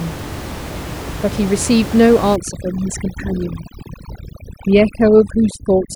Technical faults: overdone noise removal

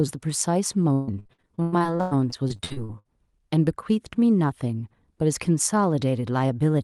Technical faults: repeated packet loss (robotic sound)

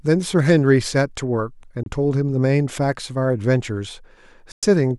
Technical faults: Bluetooth dropout

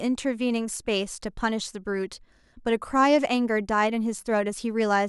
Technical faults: none

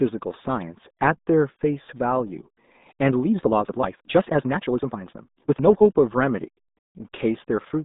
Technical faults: RealAudio 14.4 codec

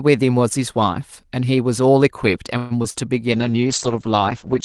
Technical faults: call audio freeze; short concealed packet loss; call bitrate drop

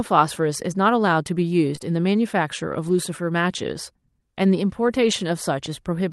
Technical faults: short concealed packet loss; lost packet rebuilt from error correction

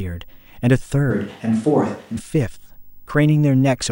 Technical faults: video or display buzz; switch to a distant microphone

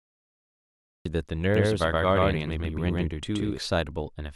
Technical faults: cut-off start; doubled audio track

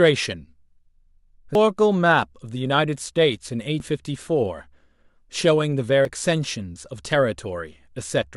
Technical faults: audio missing between chunks

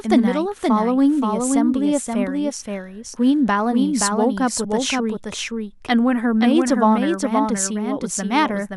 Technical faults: doubled audio track

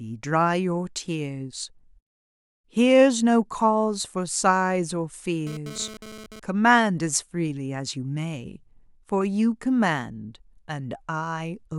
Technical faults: GSM phone buzz

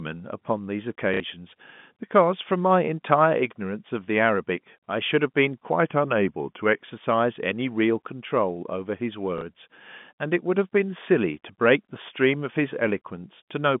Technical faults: packet loss with last packet repeated; drift correction step

